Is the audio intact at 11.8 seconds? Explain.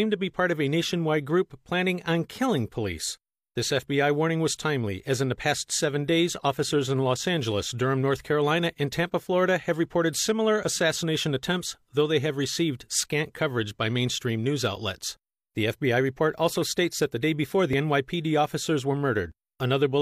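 No. At 11.75 s the speech jumps forward, a tiny skip where about 40 ms of sound (11.75 to 11.79 s) simply goes missing. This is an overlap between stream segments: two adjacent segments claim the same stretch of time, and the player discards the overlapping portion as if it were duplicated when it wasn't. The waveform is spliced across the gap, which fits 6-second segments meeting at 11.75 s.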